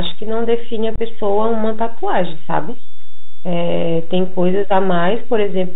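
Speech, carried over a Bluetooth headset link, with three technical faults. The first is a DC offset. The whole waveform sits shifted away from zero by a constant amount. You cannot hear it as a sound. It shows up as steady energy at the very bottom of the spectrum. It also eats into headroom, so the signal reaches clipping sooner on one side. A simple high-pass filter or mean subtraction would remove it. The second fault is the Bluetooth CVSD headset codec, and its damage is plainly audible throughout. The sound is band-limited, with nothing above 4 kHz. The coder tracks the waveform one bit per sample, stepping up or down, which fits a 64 kbps CVSD stream. Its step size adapts too slowly for fast, loud high content. Sibilants come out scratchy and distorted. A granular hiss sits under the speech. The third fault is unconcealed Bluetooth headset packet loss, from about 0.96 to 1.00 s. 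Roughly 22.5 ms of audio is missing, which points to a few voice packets dropped between headset and phone. Nothing fills the gap. The hole has abrupt edges that can click. The speech resumes briefly quieter, as the CVSD step size rebuilds.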